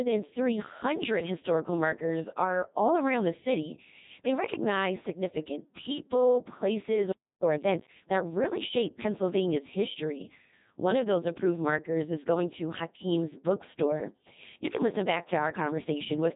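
Codec 2 vocoder damage runs throughout: the speech is rebuilt from sine waves driven by pitch, voicing and a spectral envelope, so it sounds heavily robotic and buzzy, with nothing above 3.8 kHz, which fits a very low bitrate near 2.4 kbit/s.

Time-compressed catch-up occurs from 7.44 to 8.06 s, between "recognize significant people places" and "that really shape". After a stall the player trims its backlog by cutting and cross-fading small slices, so the speech hurries at about 1.5 times normal speed while keeping its pitch.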